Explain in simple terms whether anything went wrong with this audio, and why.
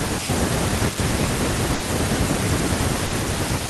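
Twice the speech briefly smears into a held, fading sound and then skips ahead, at 1.74–1.83 s and 3.06–3.15 s. Each is a burst of packet loss: missing audio was patched over, then dropped.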